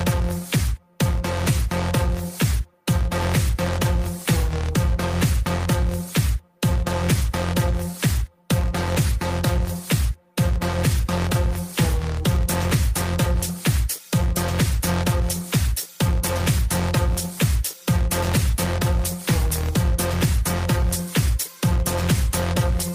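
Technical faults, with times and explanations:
No technical faults can be heard anywhere in the clip, and the signal holds steady and continuous from its first moment to its last.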